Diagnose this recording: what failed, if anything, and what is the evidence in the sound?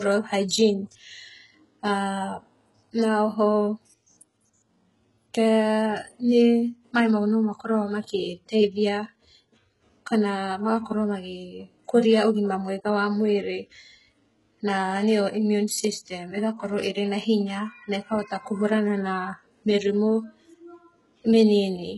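The codec stage likely failed: heavy HE-AAC compression, consistent with about 12 kbps. Throughout the speech, s sounds turn gritty and metallic because the treble is rebuilt from copied lower bands rather than coded, and nothing remains above 11.5 kHz.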